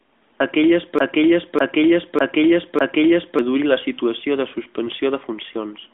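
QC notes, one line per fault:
0.99 to 3.39 s, broken-record loop: a 0.60 s fragment of speech plays four times back to back, each pass identical, so the sound stutters in a rigid cycle instead of moving forward. The exact repetition points to a stall upstream, likely in the player or stream, that kept reissuing the last fragment it held. Whatever should have been heard in those 2.4 seconds is lost when normal playback resumes.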